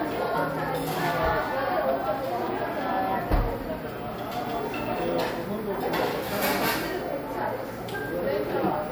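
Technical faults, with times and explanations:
Nothing here needs flagging, as the sound holds together without any technical faults showing up anywhere along the way.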